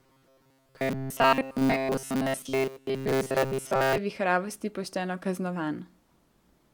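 From 0.01 to 3.98 s, before "vihravosti pošteno", robotic sound likely from repeated short buffers: 7.5 ms chunks loop, skipping most speech, forcing a metallic 133 Hz buzz.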